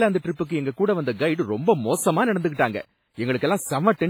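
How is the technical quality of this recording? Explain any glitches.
The technical quality is poor, with heavy compression damage across the whole recording.

WMA compression, throughout: the speech rings and sounds washy, with hiss breathing alongside it, likely from a transform codec whose smeared quantisation noise points to a low bitrate around 24 kbps.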